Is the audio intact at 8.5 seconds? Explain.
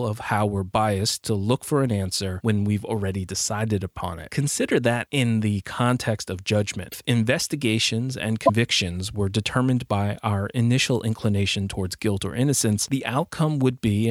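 No, not quite. Right after "investigations and" there's a brief glitch from 8.45 to 8.50 s, only about 40 ms, where the audio skips ahead and the sound garbles for a moment. That's likely a broken MP3 bit reservoir: a frame got dropped, so the next one reached back for borrowed data and decoded bytes from the wrong frame. The damage spans under two of the 26.1 ms frames before the stream gets back in sync.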